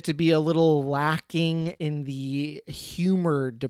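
From 1.61 to 1.71 s the speech turns rough and noisy, the sign of a lost packet rebuilt from error correction. About 60 ms, which fits three lost packets, was replaced by the low-bitrate copies carried in the following packets, so nothing goes missing, only detail. Unlike concealment, the audio still follows what was said. Immediately after, at 1.73 to 1.77 s and again at 1.77 to 1.82 s, come two short concealed packet losses of about 20 ms each. Nothing arrived, so the decoder extended the preceding sound and blended back in, giving a brief smear or wobble rather than coarse grain.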